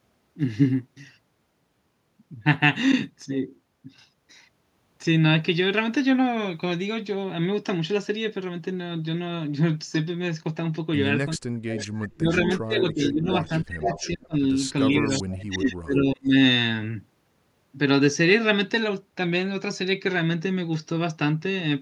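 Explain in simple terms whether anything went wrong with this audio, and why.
Between 11.36 and 14.35 s, and again from 14.92 to 16.34 s, the speech keeps ducking, at times almost vanishing, in broken pieces. That's speech suppressed in double talk: likely both ends were talking at once, and the echo canceller muted the real voice along with the echo.

Mixed into those same stretches, at 11.69 to 12.42 s, 13.04 to 14.07 s, and briefly at 15.07 s, there's a copy of the voice trailing about 438 ms behind, loudest in the middle one. That's echo leak, likely a loudspeaker on the far end whose echo canceller let some of the sound back through.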